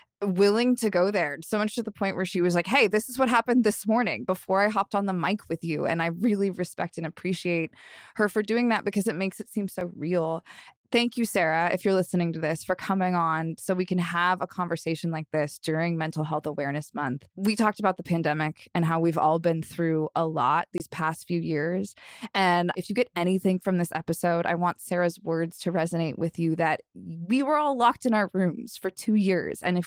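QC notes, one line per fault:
9.81 and 20.78–20.80 s, block of digital silence. The audio drops to zero and back with no fade. After "it makes it seem", a 5.8 ms gap fits an unfilled 256-sample buffer and sounds like a tick. After "been through a lot", a 20.2 ms gap is heard as a short hole.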